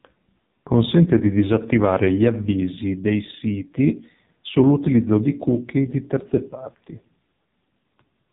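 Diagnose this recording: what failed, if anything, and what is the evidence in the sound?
The fault is at the codec stage: the entire speech recording went through the AMR narrowband mobile codec and is heavily damaged. A spectrogram shows a hard ceiling at 3.8 kHz throughout. The buzzy, synthetic voice fits a low mode near 5.9 kbps, where too few pulses drive the vocal-tract model.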